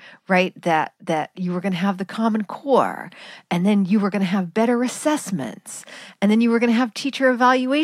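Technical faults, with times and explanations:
The speech signal is continuous and intact, with no technical fault to report.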